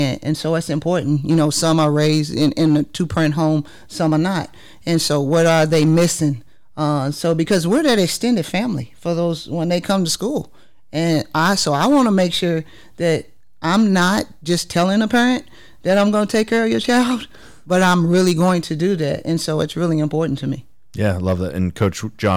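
Hard clipping runs throughout this speech: the level is driven about 8 dB past what the signal path can carry, flattening the loudest few percent of samples into harsh, crackling distortion.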